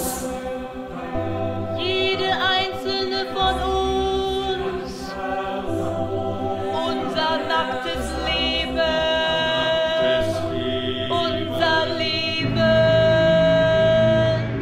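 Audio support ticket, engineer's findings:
No faults found on playback.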